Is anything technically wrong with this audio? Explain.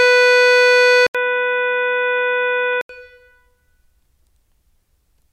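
Yes. From 1.07 s to 2.89 s the music turns dull and boxy, with nothing above 3.8 kHz, a level drop of roughly 5 dB and a new background hiss sitting around 35 dB under the music. An 80 ms gap comes first, at the switch. This is likely an input switched to a poorer device, another microphone or a headset's call profile with a narrower band, its own coloration and noise floor. The full-band sound returns at 2.89 s.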